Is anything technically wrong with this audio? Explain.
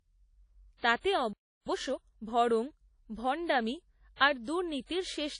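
Yes. Throughout, the speech carries plainly audible codec damage with nothing above about 10.1 kHz, most likely from WMA compression, which fits an early WMA encoder at around 32 kbps. A transform codec like this quantises each block coarsely, so noise spreads across tens of milliseconds and weak high lines are discarded. The result is a ringing, washy quality with a hiss that rises and falls with the speech, and a dull top end.

At 1.33 s the sound cuts out mid-flow and stays silent until 1.67 s, a gap of about 334 ms. This is a playback stall, likely caused by the player running short of data or having its thread blocked, so output simply stopped until it recovered. Sound then resumes at the point where it left off.

From 1.67 s to 2.33 s the player makes up the lost time with time-compressed catch-up, running at 1.5 times normal speed. It removes short segments and cross-fades across the joins to drain its backlog. 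Pitch stays where it was, but the speech is audibly hurried over those 0.66 s before returning to its normal pace.

Pre-echo appears from 4.16 s to 4.20 s, about 44 ms. A sharp onset landed late in a transform block, and the quantisation noise sized for the loud part was spread evenly across the whole block, including the quiet stretch before it. That is heard as a brief hiss leading into the attack, which itself comes across as soft and smeared rather than crisp.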